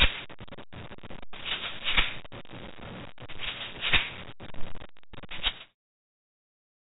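The audio shows no technical faults: it has the narrow band of a G.711 A-law call path, with nothing above 4 kHz, and it ends in a smooth editorial fade-out from about 5.5 s to 5.76 s.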